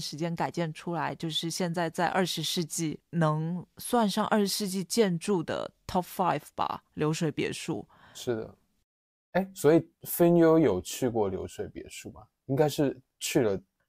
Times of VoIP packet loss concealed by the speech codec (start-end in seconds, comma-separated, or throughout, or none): none